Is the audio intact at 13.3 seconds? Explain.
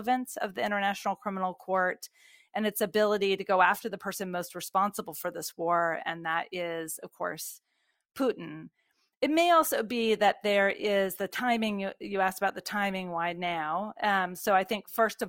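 No. From 9.95 s, right after "may also", to the end, the adaptive stream drops to a lower bitrate, likely because the connection slowed, which fits a switch from 64 to 32 kbit/s. Codec artefacts rise, shown on a spectrogram as sudden smearing with no waveform gap.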